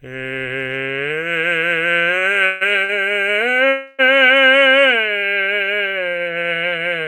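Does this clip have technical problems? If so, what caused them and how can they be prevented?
Yes. There are two short stalls from a late packet in this music. The first runs from 2.19 to 2.24 s and the second from 2.85 to 2.91 s. In each, a packet arrived after it was due, and the jitter buffer ran dry. The receiver held the last sound for about 22 ms and then about 41 ms, then resumed where it left off. Nothing is lost, but a sound lingers with a faint buzz or dip. A slightly deeper or adaptive jitter buffer would absorb these small delays.

There are also two call audio freezes, from 2.46 to 2.63 s and from 3.69 to 4.01 s. The music stops moving and turns into a fading buzz or hiss lasting about 153 ms, then about 293 ms. It never drops to full silence. Afterwards, the music continues from the same point, so a gap has been inserted rather than anything removed. The likely cause is packets held up in the network long enough to empty the buffer. 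Better network prioritisation for the audio stream, plus a larger buffer, would prevent it.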